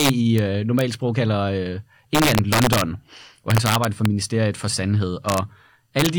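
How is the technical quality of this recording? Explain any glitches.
The recording has a recurring integer overflow fault on loud passages of the speech. It occurs at 0.00–0.38 s, 0.79–0.81 s (just before "sprog kalder"), 2.15–2.81 s (just after "sprog kalder"), 3.50–4.06 s, 5.29–5.38 s and 5.99–6.06 s. The peaks exceed full scale by between about 0 dB and about 3 dB. Instead of being held at the limit, those samples wrap around to the opposite extreme, so each overshoot becomes a full-range jump. The result is violent, sharp cracks, harsher than ordinary clipping.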